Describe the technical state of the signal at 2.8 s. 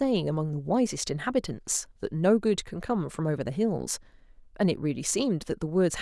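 At 2.8 s the speech signal is intact, with no dropout, clipping, glitch or other fault at that point.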